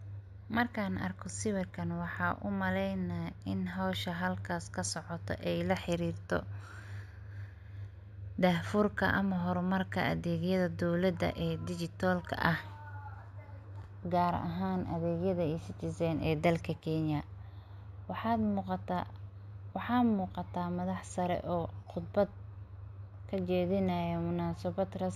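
Throughout the speech, the top of the band sounds dulled, and sibilants carry a faint metallic shimmer. This is imaging from linear upsampling. The rate was raised by joining samples with straight lines, which filters poorly, so the original spectrum is left mirrored between 8 kHz and 16 kHz, roughly 30 dB below the signal. The pattern fits a conversion from 16 kHz to 48 kHz.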